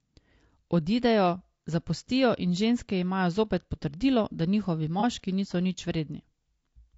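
Throughout the speech, the sound is rough and grainy, with noise filling the gaps between pitch harmonics and a thin, synthetic top band. The likely cause is low-delay AAC compression (AAC-ELD), whose short frames resolve harmonics poorly at a rate that fits around 32 kbps.

From 5.00 to 5.04 s, between "zopet potrdilo da njihovi" and "niso nič", a brief smeared, noisy patch interrupts the sound. This is AAC frame loss with concealment: roughly 30 ms of audio, consistent with one lost frame, was rebuilt by the decoder from the last good spectrum.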